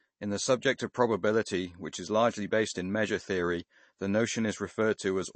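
MP3 compression, likely the cause, affects the speech from start to finish. Nothing is present above 8.3 kHz, where the encoder cut the treble to save bits, and the damage is plainly audible in a way that fits a low bitrate around 32 kbps. With so few bits, weak frequency lines are dropped and return frame by frame, giving a watery, swirly texture, and the sibilants lose their crispness.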